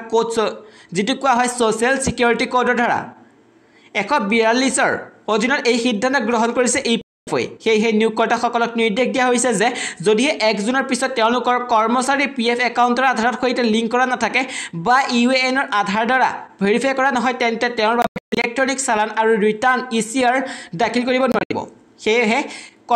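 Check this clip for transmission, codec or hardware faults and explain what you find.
Three gaps, likely a Bluetooth dropout: late packets were discarded, so the sound cuts to silence and resumes further on, as if it had kept playing. The gaps fall at 7.01 to 7.29 s, at 18.02 to 18.46 s (broken holes, longest 0.14 s) and at 21.32 to 21.52 s (longest 0.07 s).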